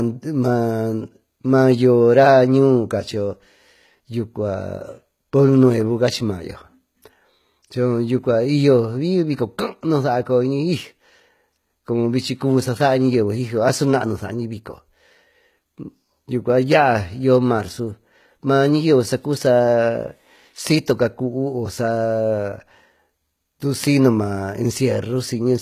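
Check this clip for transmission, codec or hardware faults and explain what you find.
One codec fault runs through the whole recording. From start to finish, s sounds come out gritty and metallic, treble sounds synthetic, and nothing is present above 14.9 kHz. This is likely HE-AAC compression rebuilding the top band by copying lower bands upward, consistent with a low bitrate near 20 kbps.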